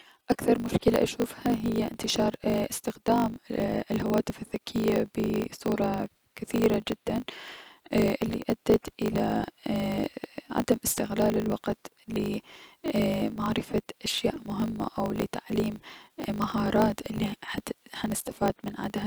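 Speech clip with a block size mismatch (truncated) throughout: block tails are discarded, giving a 50 Hz buzz and 1.07x faster playback with the timbre kept, consistent with 1024-sample writes.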